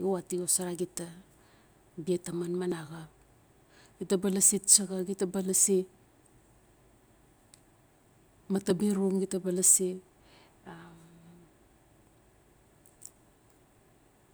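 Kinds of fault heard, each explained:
audio missing between chunks: The recording was likely handled in 6-second blocks, dropping a very short slice each time one block closed and the next opened. The speech skips forward with no pause at 2.72 s and again at 8.70 s, six seconds apart.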